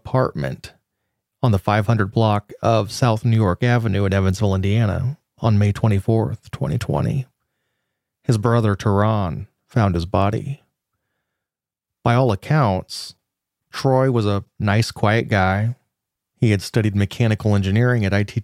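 Nothing in this speech stands out as a technical fault, so there's nothing to point to anywhere along the way.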